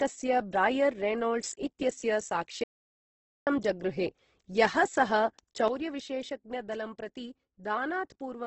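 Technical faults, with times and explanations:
Throughout, Opus compression: the speech has heavy codec damage, with a rough, grainy, noisy texture and nothing above about 8.1 kHz. This points to a low-rate encode, likely Opus at around 12 kbps in its music (CELT) mode with wideband bandwidth. That mode keeps each band's energy but refills starved bands with folded or noise content instead of leaving holes. Detail turns to grit rather than swirl, and the top of the spectrum is cut away.
1.44 to 1.52 s and 5.68 s to the end, sudden gain jump: the level steps abruptly twice. First it rises by about 12 dB for a brief 80 ms burst before falling back. From 5.68 s it drops by about 8 dB and stays down to the end. Speech and background noise shift together at each step, likely because a digital gain change was applied from one sample to the next with no ramp.
2.64 to 3.47 s, audio dropout to silence: the speech cuts off mid-flow and returns after about 0.83 s. 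The gap is completely dead, with no room tone underneath. That points to the input being lost, likely through a dropped link, a disconnected device or a stray mute, while the recorder kept writing silence. Whatever was spoken in that stretch is gone rather than merely quiet.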